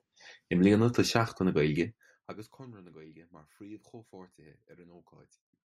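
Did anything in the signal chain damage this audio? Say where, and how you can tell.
No, nothing in this speech recording stood out on listening as a sign of damage at any stage of the signal chain.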